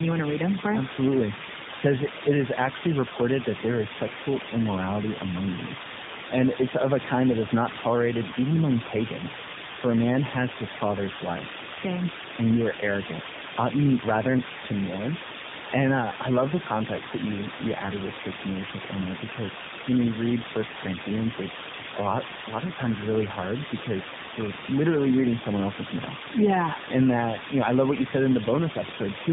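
A speech clip buried under a constant, even hiss about as loud as the speech itself, with no distortion; this is low bit depth with dither, consistent with roughly 4-bit quantisation. The speech also sounds rough, muffled and warbly, with nothing above 3.8 kHz throughout, from tandem speech coding: repeated decoding and re-encoding across links, likely passing through three speech codecs including AMR-NB.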